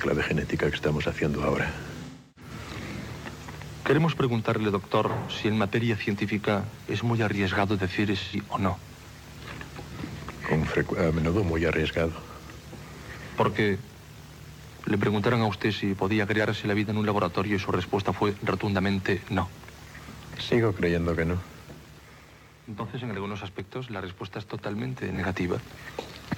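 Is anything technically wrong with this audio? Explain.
Yes. There are two faults: AAC frame loss with concealment, heard three times, and zipper noise near the end.

AAC frame loss with concealment occurs at 2.06–2.51 s, 8.20–8.36 s and 25.14–25.19 s. Frames of the coded stream did not arrive, so the decoder filled the gaps by reusing the last good spectrum. The first dropout spans about 0.3 s, which fits roughly seven lost frames. The others fit about three frames and one frame. Each sounds like a brief smeared, noisy, phasey patch.

Zipper noise runs from 24.47 to 25.64 s while the level moves by about 10 dB. This change is applied in discrete jumps at around twenty steps per second with no interpolation between them. Every jump leaves a small discontinuity in the waveform, and together they form a rapid ticking, zipping texture over the sound for as long as the change lasts.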